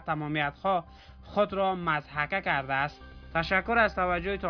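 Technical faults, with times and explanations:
No technical faults can be heard in this clip.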